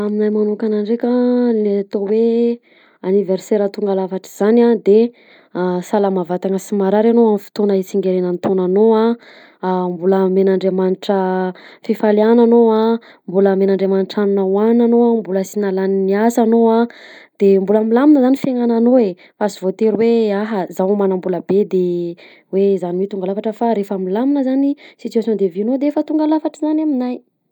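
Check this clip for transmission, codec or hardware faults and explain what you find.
No transmission, codec or hardware fault turns up anywhere in this speech clip. There is nothing here that calls for an explanation.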